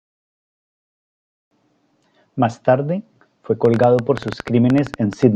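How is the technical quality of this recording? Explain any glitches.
The recording has one clear fault: a train of clicks in the last part of the speech, from 3.65 to 5.24 s. About fifteen sharp, similar-shaped pulses arrive at roughly 10.2 per second with uneven spacing, peaking about 10 dB above the speech and ticking through pauses too. The likely cause is outside interference or a faulty connection or power supply. Unlike random crackle, whose pops vary in size, these repeat with the same shape throughout the burst.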